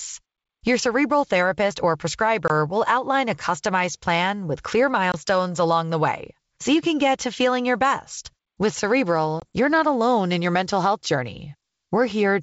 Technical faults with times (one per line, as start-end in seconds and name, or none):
2.48-2.51 packet loss on an ADPCM call
5.12-5.15 packet loss on an ADPCM call
9.40-9.45 packet loss on an ADPCM call